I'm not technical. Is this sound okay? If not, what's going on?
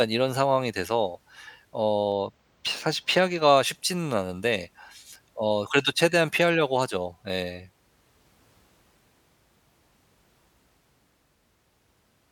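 No. From 2.12 to 3.57 s the speech turns slightly dull at the top, then returns to normal. This is a channel delay (comb filtering): one side of the recording runs a tiny fraction of a millisecond behind the other, about two samples, and when both are mixed together they cancel at fixed pitches, the first around 10 kHz. The delay is far too short to hear as an echo, so it only dulls the sound without any repeat.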